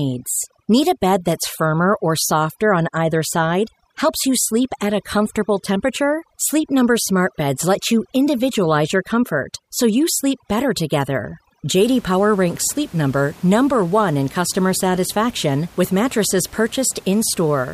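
Speech clip with overdone noise removal from the start to 11.81 s: heavy spectral gating drops background bands near the noise estimate to near-silence with twinkling specks, taking quiet parts of the voice with them. Room noise sits about 26 dB below the speech.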